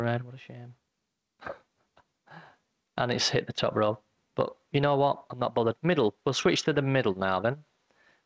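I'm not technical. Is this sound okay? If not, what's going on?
No. All the way through, loud and soft parts end up closer in level than they should, and the sound is squashed. This is gain pumping, likely from the microphone level being set far too high, so an automatic limiter keeps yanking it back down.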